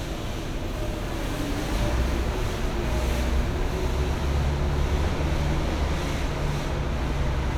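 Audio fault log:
No fault is heard anywhere in the audio.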